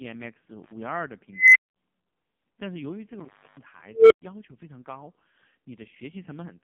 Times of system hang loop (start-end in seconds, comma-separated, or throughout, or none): none